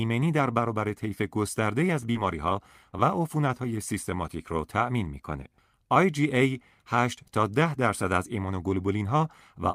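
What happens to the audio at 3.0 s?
Just before 3.0 s the speech smears for an instant, a brief wobble from about 2.91 to 2.95 s. This is short concealed packet loss: roughly 20 ms of audio never arrived in time, so the receiver invented about 19 ms by extending the preceding sound, following its pitch if voiced or using shaped noise if not, then crossfaded back into the real signal. A short sound falling in that gap could simply disappear.

Right after, from about 2.99 to 3.01 s, there is a 20 ms stretch that sounds rougher and noisier, with no gap at all. This is a lost packet rebuilt from error correction: the next packet carried a low-bitrate backup copy, as Opus in-band forward error correction provides, and the decoder played that copy. In a full-band call the top frequencies also dip briefly here, because the copy lacks them and they have to be estimated.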